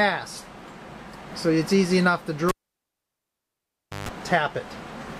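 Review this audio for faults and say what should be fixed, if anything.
A cable pulled and plugged in runs from 2.49 s to 4.09 s. A pop marks the moment the live connector leaves its socket. The signal then drops to near silence for about 1.55 s. As the plug goes back in, only the tip touches at first. That bridges the input to stray mains, so a 50 Hz buzz sounds for about 150 ms. A second pop follows as the full connection returns. To prevent it, mute the channel before moving any cable.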